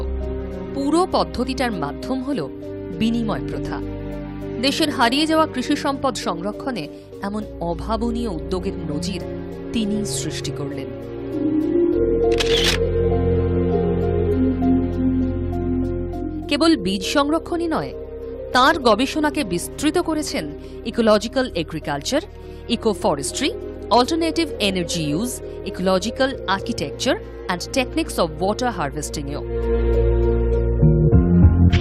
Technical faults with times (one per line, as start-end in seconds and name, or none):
3.66-3.71 frames out of order